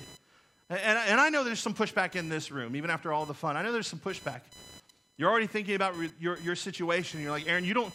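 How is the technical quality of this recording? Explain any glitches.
The speech is marred by computer activity noise running through the whole recording. It is a buzzing or chirping at a pulse rate near 1 kHz, roughly 25 dB below the speech, rising and falling with the computer's workload rather than with the talking. Processor, graphics or mouse activity disturbs the shared ground, leaking into the audio path. A spectrogram shows a thin line near 1 kHz with harmonics, persisting through pauses; the waveform shows low-level hash between phrases.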